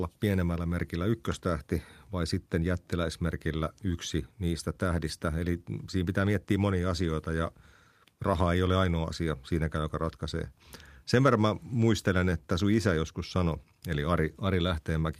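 Recorded speech, with no technical faults present in the signal.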